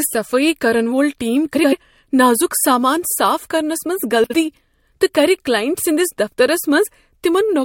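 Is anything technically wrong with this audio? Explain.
Yes. From 1.55 to 1.73 s, between "کرن وول ٹیم" and "نازک سامان صاف کرنس", and again from 4.23 to 4.34 s, the speech breaks into a garbled flutter. These are frames out of order: two neighbouring blocks, about 85 ms and 39 ms long respectively (which fits runs of four frames each), were decoded swapped, so each stretch plays with its halves exchanged but loses no time.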